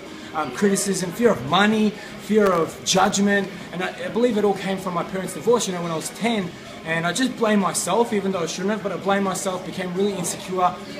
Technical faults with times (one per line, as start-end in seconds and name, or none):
2.46-3.10 processor overload crackle